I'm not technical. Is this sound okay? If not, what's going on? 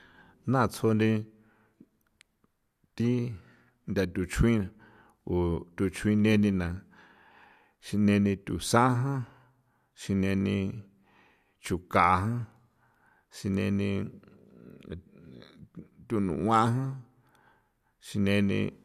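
Yes, this recording sounds fine, and nothing goes wrong at any point in it. There is no technical problem to point to, so there is nothing here to fix.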